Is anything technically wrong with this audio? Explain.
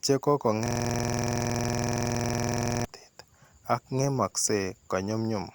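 Yes. There is a system hang loop from 0.66 to 2.85 s, right after "che ko". The computer or its audio driver stalled while the sound hardware kept replaying its ring buffer. One 46.44 ms piece of speech repeats exactly, about 47 times. That length fits a 2048-sample buffer. The loop cycles at 21.5 Hz, so it sounds like a harsh, rattling buzz rather than slow stuttering.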